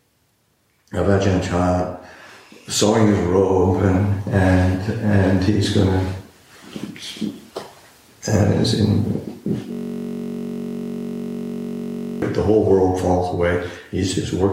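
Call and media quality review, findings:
System hang loop, 9.72 to 12.22 s: audio replaced by a steady buzz at about 47 Hz. A 21.33 ms fragment repeats exactly, 117 times, consistent with a driver or host freeze while the device kept replaying its ring buffer, which fits a 1024-sample buffer.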